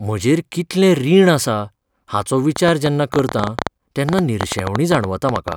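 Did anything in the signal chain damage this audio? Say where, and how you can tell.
Yes. A train of clicks runs from 2.56 s, just after "कितलें रीण आसा हाचो", to 5.53 s. It consists of about thirty similar pops at an uneven 9.8 per second, up to about 15 dB above the speech, likely interference in the analogue wiring. They appear as sharp waveform spikes and as irregular full-band vertical lines on a spectrogram.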